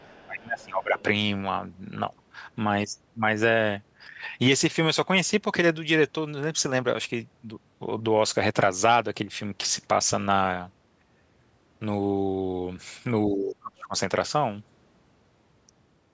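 An echo canceller that likely could not tell the near talker from the loudspeaker signal during double talk pulls the speech down from 0.0 to 0.99 s. The voice sinks by about 20 dB at its deepest and sounds muffled and patchy for roughly a second. In the same opening stretch, from 0.0 to 0.26 s, echo of the other side's voice leaks through at about 35 dB below the speech as a faint second voice. That residue was likely left because the canceller did not fully subtract the loudspeaker signal. Another brief scrap of the other side's voice leaking through appears from 0.99 to 1.03 s, a little stronger at about 30 dB down. Speech suppressed in double talk returns from 13.3 to 13.95 s with a deeper drop of about 30 dB, so the voice dips for around 0.7 s before recovering. Throughout, the call's microphone processing leaves nothing above 8 kHz.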